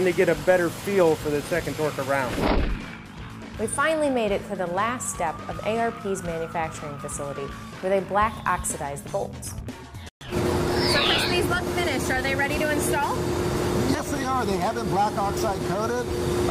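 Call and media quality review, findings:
Playback stall at 10.09–10.21 s: output drops to silence for about 122 ms mid-flow, then resumes. Likely cause is buffer underrun or a blocked player thread starving the output device until data arrives again.

Time-compressed catch-up at 10.21–10.45 s: audio runs hurried at 1.5x with unchanged pitch. Player shortening its post-stall backlog by dropping small segments and cross-fading across the joins.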